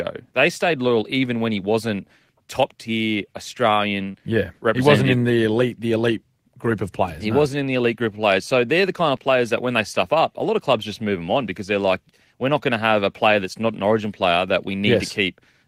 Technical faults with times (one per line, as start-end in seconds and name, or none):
4.11-4.16 short concealed packet loss